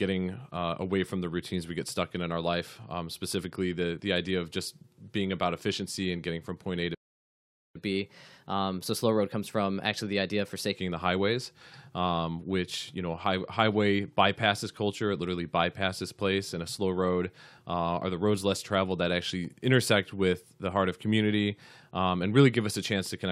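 A speech recording with a playback stall followed by catch-up at higher speed. At 6.94 s the audio cuts to silence for about 0.8 s, until 7.76 s, then resumes with "the highways um which". A gap of this length in mid-flow is most likely the player's buffer running dry or its output thread being blocked, so nothing reached the output until data flowed again. From 7.76 s to 10.76 s the player works off the backlog by resampling at 1.1 times normal speed. Because the speedup is done by resampling rather than time-stretching, pitch rises along with tempo, by roughly one and a half semitones, which makes the voice sound slightly hurried and raised for those three seconds. At 10.76 s both speed and pitch drop back to normal.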